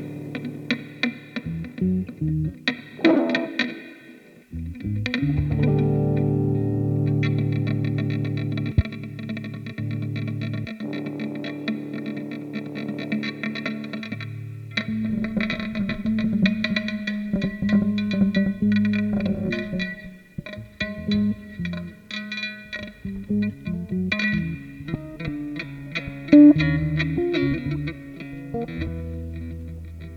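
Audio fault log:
No audible faults detected.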